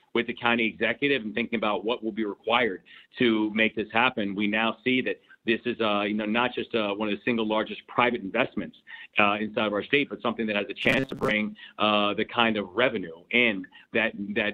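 Robotic sound from repeated short buffers runs from 10.82 to 11.31 s: a rigid, metallic buzz near 133 Hz. This likely comes from a roughly 7.5 ms buffer being replayed while fresh audio arrived too seldom, so about half the material was skipped.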